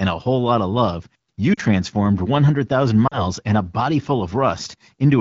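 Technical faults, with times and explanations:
1.54–1.60 s, lost AMR speech frames: just after "lot of love you", the decoder repeats its last good frame at falling gain, causing a brief drop to near silence, which fits two 20 ms frames lost.
3.07–3.22 s, lost AMR speech frames: a similar short dip, with the AMR-WB concealment filling the gap before "and a body" resumes weak or rough for a moment.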